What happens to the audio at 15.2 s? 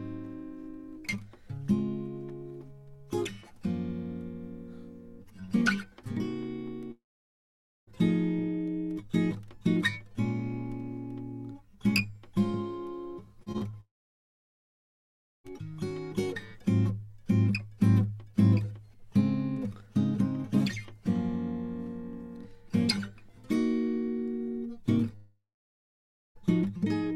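A long network dropout, 13.81 to 15.46 s, leaves 15.2 s silent. The music is likely cut off in transit, fades into a brief concealment buzz, then returns with about 1.6 s missing.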